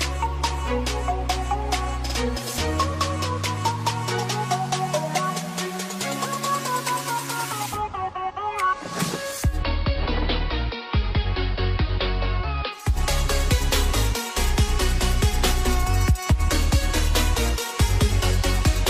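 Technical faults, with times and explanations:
9.39–12.96 s, digital radio blending to analogue: the receiver lost its digital stream and cross-faded over about 250 ms to the station's AM broadcast, so the level drops about 3 dB, and hiss rises to roughly 30 dB below the programme before the return to digital.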